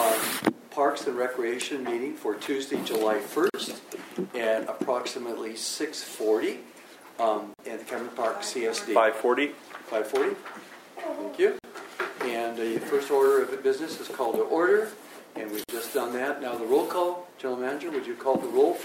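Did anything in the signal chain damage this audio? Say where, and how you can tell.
Yes. Gaps at joins of encoded pieces, a codec-stage fault, open at 3.50, 7.54, 11.59 and 15.64 s, every 4 s, each 44 to 49 ms. Separately encoded pieces kept their encoder delay and padded last frame, so silences with smeared edges cut in before the sound resumes where it stopped.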